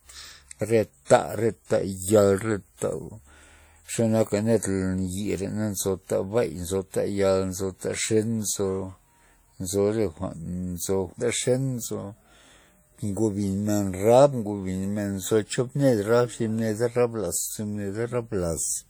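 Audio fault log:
throughout WMA compression: the speech rings and smears, with a washy hiss that swells and fades with each phrase. This is likely a long-block transform codec such as WMA 1, and the damage fits a bitrate near 48 kbps. Unlike plain band-limiting, content still reaches about 20.1 kHz.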